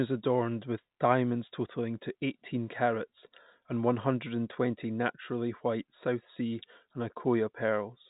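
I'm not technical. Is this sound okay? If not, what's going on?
Yes, this sound is okay, with nothing going wrong in it.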